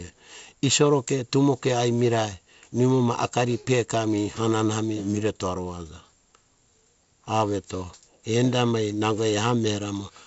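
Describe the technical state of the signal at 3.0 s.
At 3.0 s the speech is intact, with no fault, carried through G.722 wideband telephone coding at 48 kbit/s, which shows as content ending around 7.7 kHz and only light coding hiss.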